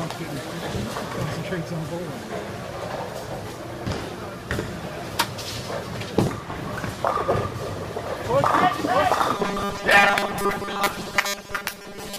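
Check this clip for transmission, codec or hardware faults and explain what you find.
One fault appears near the end. From 9.36 s to 12.19 s the sound turns into a rigid, metallic buzz at 200 Hz that only loosely tracks the original. This is robotic sound from repeated short buffers, likely caused by audio arriving too seldom and the gaps being filled by looping the last block, here about 5 ms. Most of that stretch is repeated material rather than fresh audio.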